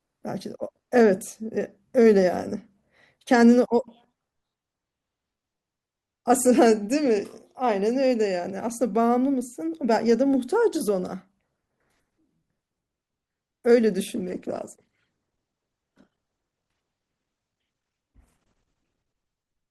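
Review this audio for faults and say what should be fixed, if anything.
From 14.16 s to the end at 19.7 s the adaptive stream switches to a lower bitrate. Codec artefacts abruptly rise with no gap, which fits a step from about 64 to 16 kbit/s Opus. To prevent it, give the player a larger buffer and more conservative bitrate switching so it can ride out a slower connection.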